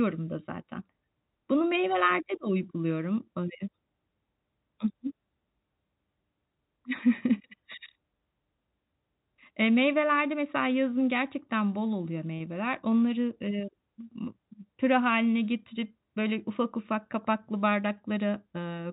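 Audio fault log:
12.38 to 12.40 s, packet loss with pitch repetition: right after "yazın gerçekten bol oluyor", about 20 ms of audio failed to arrive, which fits a single lost packet. The receiver filled the hole by replaying the last pitch period of the speech, so instead of a dropout there is a brief held, slightly buzzy tone. The gap was short enough that it never fades to silence, and the speech resumes through the telephone-band G.711 path.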